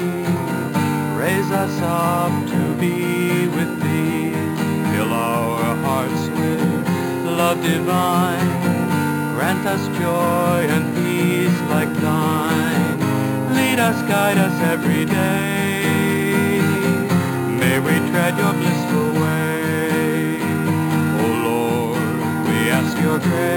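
Throughout, there is imaging from sample-and-hold upsampling. The audio went from 11 kHz to 48 kHz by repeating samples unsmoothed, leaving a mirrored copy between 5.5 and 11 kHz, about 18 dB down. Unlike hiss, this metallic fizz follows the sound's level and moves against its pitch.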